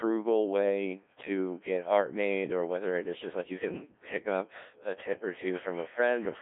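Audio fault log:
Throughout, Codec 2 vocoder: speech sounds robotic and buzzy, rebuilt from sine waves at about 1.3 kbit/s, band-limited to 300 Hz–3.5 kHz, nothing above 3.6 kHz.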